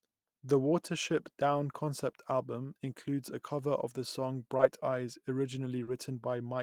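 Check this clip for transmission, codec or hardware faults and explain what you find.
Two brief dropouts in the speech point to short concealed packet loss. Just after "cover of the song", at 4.57 to 4.61 s, a momentary smear blurs the sound, and at 5.83 to 5.89 s a slightly longer wobble follows. About 20 ms and then 40 ms of audio arrived too late to decode. The receiver bridged each gap by extending the preceding sound, then crossfaded back into the real signal.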